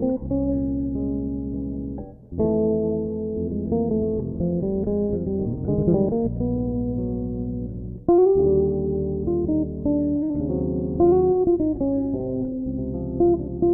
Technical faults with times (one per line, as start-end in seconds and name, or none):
none